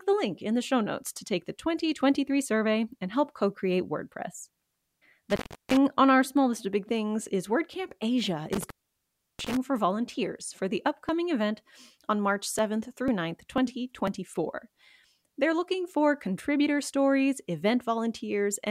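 Speech recording with two kinds of fault. Intermittent contact cuts the sound from 5.30 to 5.77 s (open about 0.35 s, just before "on our small list") and from 8.53 to 9.57 s (open about 0.69 s), with crackle at each edge and hiss underneath. That points to a loose cable rather than a software glitch. From 10.09 to 14.07 s, periodic USB or driver dropouts skip roughly 2 ms every 0.50 s, about ten evenly spaced ticks. Unlike the contact fault, these are too short and too regular for a cable, and they are audible only while sound is present.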